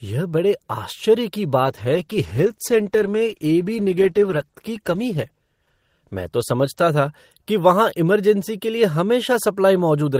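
From 1.66 s to 7.57 s there is a call bitrate drop. The call's bandwidth estimate fell, so the encoder coded the speech with far fewer bits. The sound turns rough and muffled, with the top end cut, and stays at the lowest rate for about 3.3 s. That fits a fall from 32 to 13 kbps.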